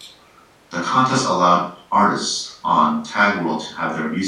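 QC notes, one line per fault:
No faults found on this speech clip.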